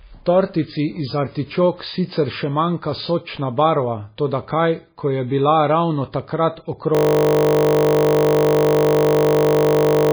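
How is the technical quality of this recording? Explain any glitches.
The recording has two serious problems: heavy compression damage throughout, and a freeze near the end that turns the last few seconds into a buzz.

Across the whole speech clip, the sound is dull and watery, with nothing above 5 kHz and a swirly, metallic quality on sibilants. The likely cause is heavy MP3 compression at a very low bitrate, one that fits something near 17 kbps. With so few bits available, the encoder cuts all treble at a fixed point and drops weak frequency components that flicker in and out from frame to frame. On a spectrogram this appears as a hard horizontal ceiling at 5 kHz, with patchy, blocky holes below it.

From 6.95 s to the end, the speech is replaced by a steady buzz. This is a system hang loop: the computer or driver stalled while the audio hardware kept replaying the same 20 ms piece of its ring buffer, over and over. 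Repeating a 20 ms segment produces a tone at 50 Hz. On a waveform, the section shows one identical short shape tiled exactly many times. On a spectrogram, it appears as evenly spaced horizontal harmonic lines at multiples of 50 Hz.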